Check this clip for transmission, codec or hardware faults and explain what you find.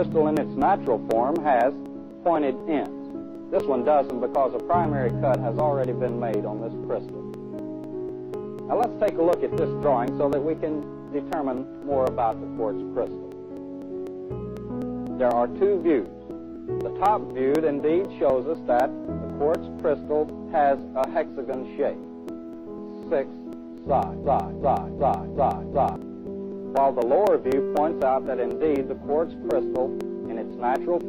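Two faults turn up here.

Periodic USB or driver dropouts run from 0.12 to 31.01 s. Every 0.25 s the driver skips about a millisecond, giving a steady ticking under the sound.

There's also a broken-record loop from 24.24 to 25.96 s. A 0.37 s fragment repeats five times back to back, likely from a stalled player or stream, and the audio that should have played there is lost.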